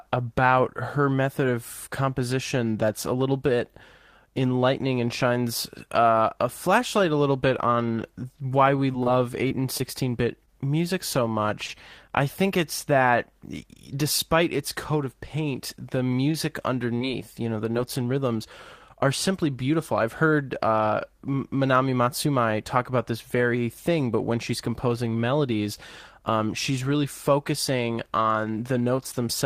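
Right after "a little bit on", from 8.19 to 9.81 s, there's repeated packet loss. Eight short gaps, none longer than 24 ms, get patched by extending the last sound, so it turns choppy and a bit robotic until "bit music so". At 11.67 to 11.70 s a short concealed packet loss leaves a quick smear where about 20 ms went missing. After "coat of paint the", at 16.32 to 16.36 s, there's a short stall from a late packet: the buffer ran dry for about 18 ms and the sound just holds a touch too long, with nothing lost. Then at 16.98 to 17.02 s, just before "you know the", another brief concealed loss drops about 20 ms and leaves a little wobble.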